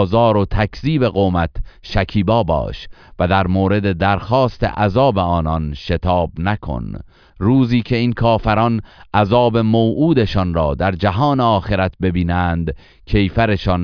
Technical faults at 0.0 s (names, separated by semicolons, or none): none